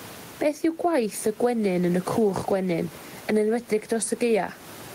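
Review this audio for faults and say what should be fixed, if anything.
Gain pumping runs through the whole speech clip. The room noise sits about 31 dB below the speech. The swing is roughly 15 dB. Loud and quiet passages sound pressed toward one level, and the result feels squashed. The likely cause is input gain set far too high, with a fast limiter or compressor clamping down on each loud moment. Lowering the microphone gain and easing or slowing the limiter would prevent this.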